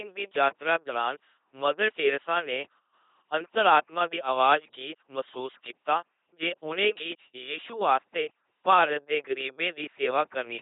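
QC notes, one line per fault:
throughout, LPC-10 vocoder: heavy robotic buzz, speech rebuilt by a simple filter fed pulses or noise, nothing above 3.8 kHz, fits 2.4 kbit/s.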